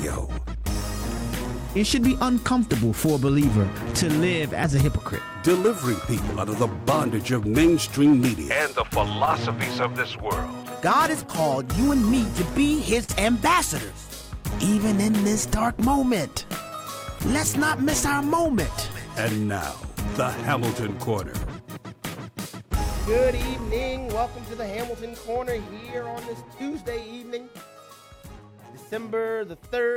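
From the start, the audio carries clock drift between sender and receiver. The sender's clock runs roughly 3% slower than the receiver's, so the jitter buffer keeps draining and the receiver must pad it out. Small timing hiccups recur all through the clip, at uneven intervals.

From 0.27 s to 29.39 s, repeated timing corrections keep the streams aligned. Short pieces are duplicated at uneven intervals, adding about a second in total and slowing playback to 97%. On a waveform or spectrogram, brief repeated segments appear, each a tiny hiccup.

At 13.04 s, a short stall from a late packet lasts until 13.12 s. The buffer ran empty, and the receiver stretched the last sound for 45 ms before resuming with nothing lost. A spectrogram shows a frozen, smeared patch, and the waveform a held, slightly dipping stretch.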